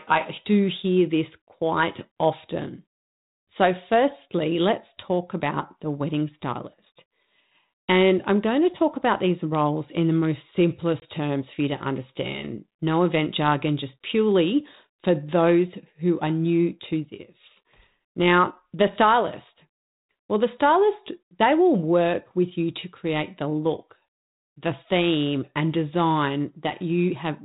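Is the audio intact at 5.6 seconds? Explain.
Yes, the audio is intact at 5.6 seconds, with the speech passing cleanly through its 32 kbit/s G.726 telephone-band coding and no fault at that moment.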